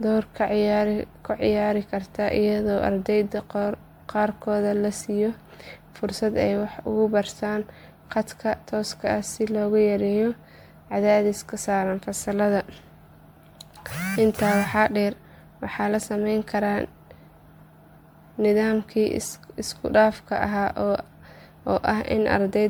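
Across the whole of this speech recording the sound is swirly and hollow, with smeared, watery texture and softened consonant attacks, and nothing survives above 19.9 kHz. That degradation goes well beyond what a single lossy pass would leave, and points to generation loss, likely from re-encoding around ten times through an MP3 chain at something like 128 kbit/s, with each pass requantising on a shifted frame grid so that noise and spectral gaps pile up.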